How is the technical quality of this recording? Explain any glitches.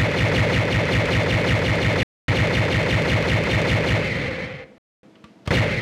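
Two hard-edged dropouts interrupt the recording, at 2.03–2.28 s and 4.78–5.03 s, each a 250 ms gap between chunks. The audio appears to have been delivered in blocks of about 2.5 s, with silence inserted at each join, likely from codec padding or a player starting each block late. Nothing is lost, but playback stops abruptly and resumes just as abruptly, giving regular clean holes roughly 2.75 s apart.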